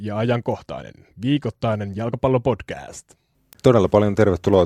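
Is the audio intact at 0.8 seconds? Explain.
No. Word clock ticks run from 0.52 to 4.53 s. An unlocked receiver clock drifts, dropping or repeating single samples, giving sharp ticks about every half second.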